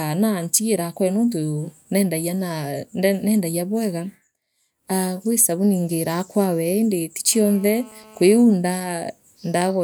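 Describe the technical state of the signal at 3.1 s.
At 3.1 s the speech signal is intact, with no audible dropout, clipping, glitch or other fault at that point.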